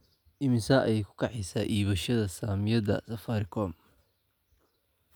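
No technical faults can be heard anywhere in this recording.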